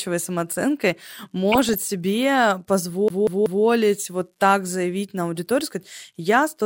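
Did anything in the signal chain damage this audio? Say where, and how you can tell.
Yes, two kinds of damage, one from radio reception and one from playback.

The first is DAB burbling, at 1.52 to 1.78 s and again at about 6.00 to 6.07 s, just after "заявить на аудиторию сказать". This is a codec-stage fault. At weak reception a bit error rate of a fraction of a percent gets through error correction into the MP2 data. Corrupted scale factors and samples make single frequency bands lurch in level frame by frame, which gives short blips of noise over the speech. Unlike network packet loss, the sound never drops out or repeats. It keeps running while individual sub-bands go wrong.

The second is a CD stuck on one turn, from 3.08 to 3.65 s, just before "вот так заявить на". This is a storage and playback fault. A scratch sends the pickup back one track at the same point on each rotation, so a 188 ms slice plays three times in an even stutter, with a brief mute at every jump. 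What separates it from buffer-underrun glitching or concealment repeats is that the loop is identical each time and lands on a fixed, regular rhythm.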